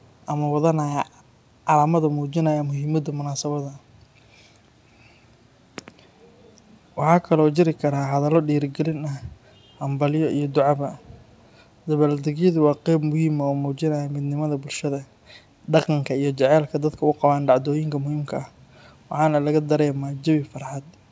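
It's a speech recording, and right at the start, from 0.02 to 0.07 s, there's a brief, very faint echo leak: a scrap of voice trailing the original by about 0.39 s, sitting way below the speech, likely from a speakerphone whose echo canceller let some of its mic pickup slip back. Nothing reaches above 8 kHz, which fits a wideband call codec like G.722.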